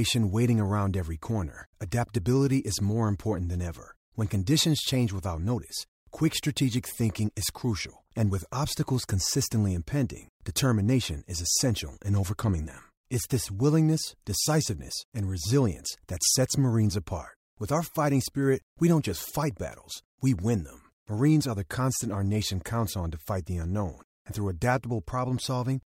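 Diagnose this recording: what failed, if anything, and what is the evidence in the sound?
Nothing failed here: listening across the whole speech recording, I can't hear anything that points to a problem at any stage of the chain.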